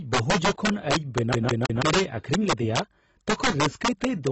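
Integer overflow runs through the whole speech clip. The gain pushed peaks about 6 dB past the integer limit. Instead of being held there, those samples wrapped to the opposite sign. Only a small share of samples crossed over. Each one gives a sharp crack on the loudest moments.

Codec damage is plainly audible throughout, likely from AAC compression. Nothing is present above 8 kHz, so the speech sounds dull. That low cut-off points to a low bitrate, around 24 kbps. The coder quantised its frequency lines coarsely to save data.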